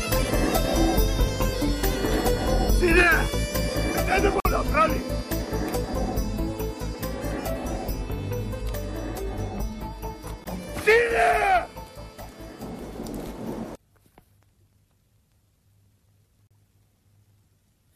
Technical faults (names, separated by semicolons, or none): gap between stream segments